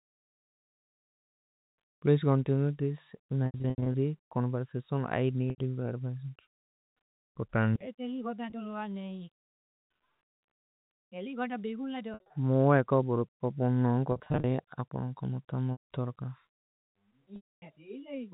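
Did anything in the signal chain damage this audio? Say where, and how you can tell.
Yes. The network stage lost packets, and the receiver concealed them with packet loss with pitch repetition at 3.46–3.94, 5.50–5.58, 8.50–8.52, 12.14–12.30, 14.12–14.44, 15.72–15.84 and 17.36–17.62 s. Each gap is bridged by looping the last pitch period, so short gaps sound held and buzzy and longer ones fade into silence. The gaps are multiples of 20 ms, which fits 20 ms packets. On a spectrogram, harmonics freeze into flat bands that fade out. Those at 3.46, 12.14 and 14.12 s are broken up by returning speech.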